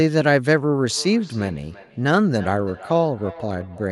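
From 0.9 s to the end, a feedback echo between two devices is present. A nearby device replays this microphone's signal, the microphone captures it again, and its echo canceller ignores sound it did not play. Each word returns roughly 300 ms later, peaking about 19 dB below the speech.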